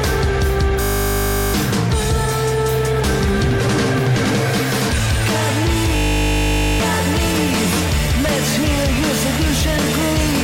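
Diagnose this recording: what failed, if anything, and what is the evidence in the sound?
System hang loop at 0.82–1.54 s and again at 5.96–6.8 s, a driver or buffer failure. In both stretches the audio gives way to a steady buzz at 50 Hz, one 20 ms slice repeating exactly, 36 times in the first and 42 in the second. The host stalled while the interface kept replaying the same short ring buffer, which fits a buffer of about 20 ms. About 0.7 s and about a second of real audio are lost.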